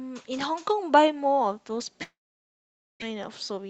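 From 2.03 s to 3.04 s the speech gives way to a short buzzy continuation that fades, then near silence for most of that second. This is a long network dropout, likely caused by audio that never arrived; the receiver extended the last sound, then gave up, and about 0.6 s is lost outright.

From 3.12 s to 3.65 s the speech sounds hurried but keeps its pitch, running at 110% speed. This is a jitter buffer speed-up: with a backlog of audio, the receiver repeatedly cut out pitch-period-sized slivers, roughly 50 ms in total.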